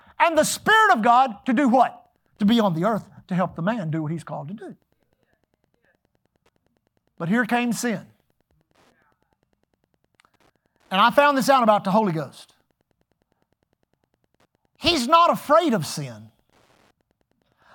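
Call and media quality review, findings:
Wi-Fi interference, throughout the speech. Steady faint ticking about ten times a second, one tick every 102.4 ms, well below the speech, around 50 dB down. Probable component: a nearby Wi-Fi radio whose beacon is rectified by the audio circuit.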